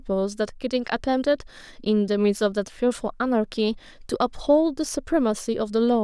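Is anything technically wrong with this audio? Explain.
No, nothing technically wrong can be heard here.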